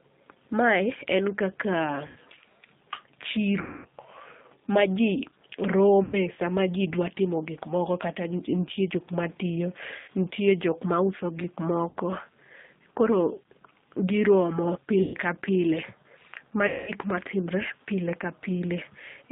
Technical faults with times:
0.00-19.32 G.729 codec
2.07-2.17 VoIP packet loss concealed by the speech codec
3.61-3.85 VoIP packet loss concealed by the speech codec
6.04-6.15 VoIP packet loss concealed by the speech codec
9.99-10.08 VoIP packet loss concealed by the speech codec
11.89-11.95 VoIP packet loss concealed by the speech codec
15.02-15.15 VoIP packet loss concealed by the speech codec
16.67-16.92 VoIP packet loss concealed by the speech codec

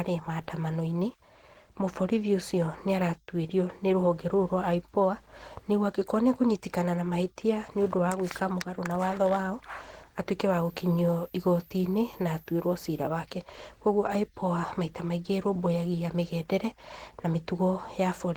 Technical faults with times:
0.00-18.36 Opus compression
10.51-13.07 switching supply whistle

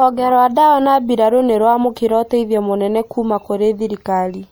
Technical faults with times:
0.00-4.52 MP3 compression

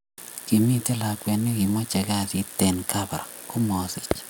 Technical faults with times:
none

